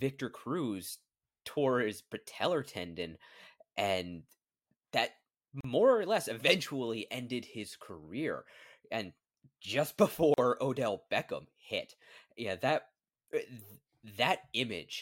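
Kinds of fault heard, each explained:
Gap at a join of encoded pieces: separately encoded sections were joined untrimmed, so encoder delay and last-frame padding leave silences of 38 ms at 5.61 s and 41 ms at 10.34 s. Unlike a dropout, nothing is lost; speech resumes where it stopped.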